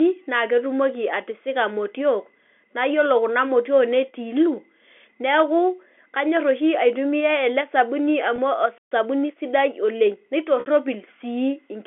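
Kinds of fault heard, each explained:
Packet loss with pitch repetition: lost audio is bridged by repeating the last pitch period. At 8.36 s, after "aitumia ele sabuni", a 20 ms gap (one lost packet) gives a brief buzzy hold. At 10.60 s a 60 ms gap fades toward silence before a short cross-fade back.
Playback stall: the output stops mid-flow at 8.78 s and stays silent for 132 ms before resuming. The player was likely starved of data or had its playback thread blocked, so nothing reached the output until it recovered.
Time-compressed catch-up: from 8.92 s to 10.24 s the player shrinks its backlog after the stall by cutting out small pieces and cross-fading across them. The speech runs at 1.1 times normal speed, hurried at unchanged pitch.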